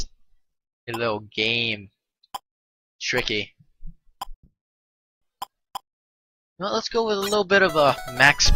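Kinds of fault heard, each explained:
long network dropout: At 4.33 s the sound smears into a brief fading buzz, then goes silent for about 0.77 s and resumes at 5.23 s with 0.88 s lost, likely from a stretch of undelivered packets. Spectrogram shows a smeared tail, then a blank band.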